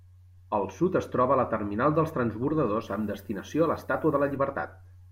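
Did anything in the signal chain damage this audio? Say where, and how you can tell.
Yes. From 2.82 to 4.36 s a thin, steady hiss sits roughly 35 dB under the speech and climbs sharply toward the top of the band. That's low bit depth with noise shaping at a sample-format conversion, consistent with about 10 bits. The rounding error got pushed up into the highs.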